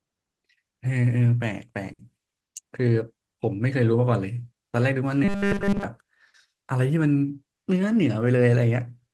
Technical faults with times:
0.00-9.14 clock drift between sender and receiver
0.41-9.13 repeated timing corrections
1.93-2.02 short stall from a late packet
5.24-5.84 robotic sound from repeated short buffers
6.28-6.37 short stall from a late packet

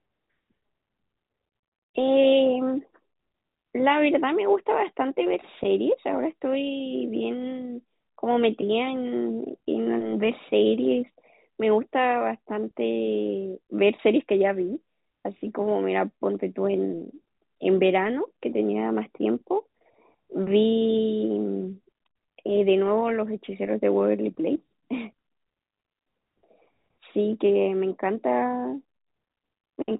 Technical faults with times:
none

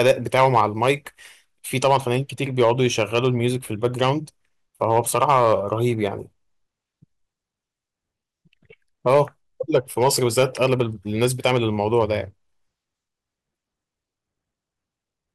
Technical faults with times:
0.00-0.91 hard clipping
1.84-2.16 hard clipping
2.60-3.27 hard clipping
3.84-4.11 hard clipping
4.82-5.73 hard clipping
9.07-9.21 hard clipping
9.74-10.81 hard clipping
11.22-12.04 hard clipping

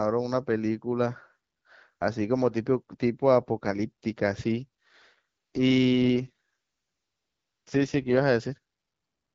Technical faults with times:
5.14-8.24 AMR rate drop

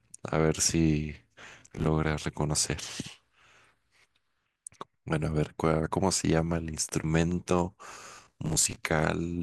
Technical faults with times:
1.41-1.87 processor overload crackle
6.78-7.60 train of clicks
7.90-8.76 processor overload crackle

